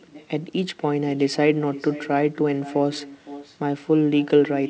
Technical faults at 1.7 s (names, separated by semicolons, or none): echo with no canceller